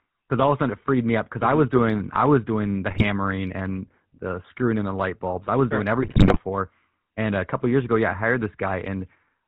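Throughout, the speech passes through the GSM full-rate codec, whose pulse-driven vocal-tract model and 4 kHz ceiling, consistent with a 13 kbps stream, leave a plainly buzzy, gravelly roughness. GSM bit errors from 2.89 to 3.04 s and again from 6.02 to 6.40 s corrupt the decoder's filter, pitch and gain values, breaking the speech into squawks, pops and gargling.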